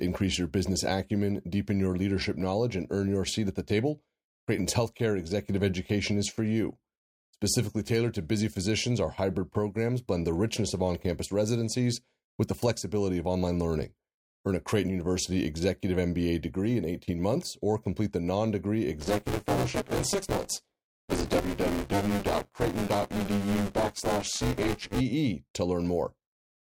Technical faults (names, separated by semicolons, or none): buffer tearing